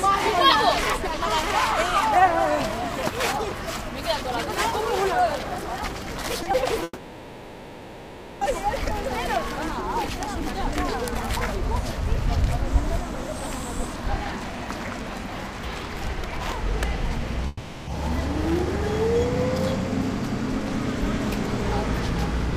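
The recording is of everyday sounds and shows two kinds of transmission fault. Short concealed packet loss occurs twice in quick succession, at 6.43 to 6.47 s and 6.51 to 6.55 s. In each event about 20 ms of audio failed to reach the decoder in time, and the receiver bridged the hole by extending the preceding sound before blending back into the real signal. The result is a brief smear or wobble. A very short transient falling in either gap would be lost.

The second fault sounds like a long network dropout. From 6.83 to 8.43 s, roughly 1.6 s of material is absent. The last sound is carried forward as a decaying buzz or hiss for almost the whole gap, with a brief moment of silence before real audio resumes further on in the signal. A shorter event of the same kind runs from 17.47 to 17.89 s, where about 0.4 s is replaced by fading continuation with no silent stretch. The likely cause of both is a stall in packet delivery long enough that concealment could only extrapolate, so the original content of those spans is simply missing.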